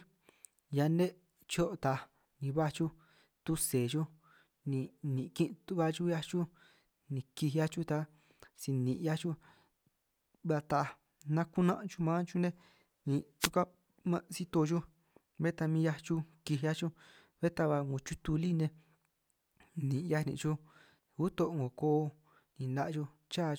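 At 13.40 s the speech is broken by a wireless microphone noise hit. It lasts until 13.50 s. The FM radio link fades briefly as reflected signals cancel at the receiver. Receiver noise rises. It sounds like a short swish of static.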